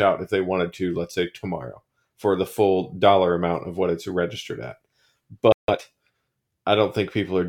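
At 5.52 s the player likely ran short of data or had its thread blocked, a playback stall: the speech drops to silence for about 0.16 s until 5.68 s. Time-compressed catch-up follows, with the player trimming its backlog by splicing out short pieces, so from 5.68 to 5.82 s the speech runs at double speed, hurried but unchanged in pitch.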